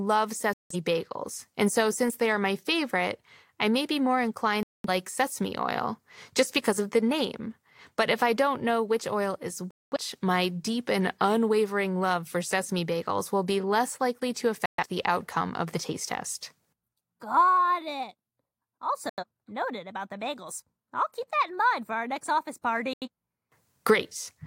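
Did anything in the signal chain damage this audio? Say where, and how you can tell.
Yes. Digital broadcast dropouts occurred at the reception stage. The speech mutes abruptly at 0.53, 4.63, 9.71, 14.66, 19.09 and 22.93 s. Each hole lasts 0.14 to 0.26 s. The receiver muted until valid frames returned, so that audio is lost.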